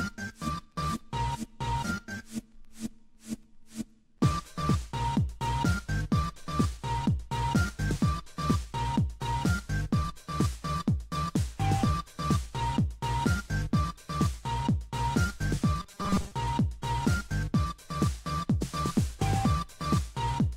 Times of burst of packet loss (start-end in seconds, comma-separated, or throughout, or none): none